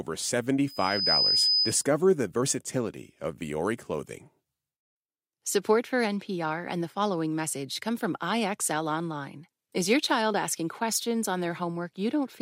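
From 0.67 s to 1.85 s a piercing 5 kHz tone swells over less than half a second into a squeal a few decibels louder than the speech. It is loudspeaker feedback squeal: the microphone picked up its own loudspeaker, and the loop gain at 5 kHz exceeded one.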